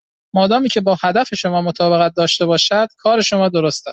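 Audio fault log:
No faults found; the speech passes through Opus voice compression in its hybrid, full-band mode, with only the light coding texture that setting leaves.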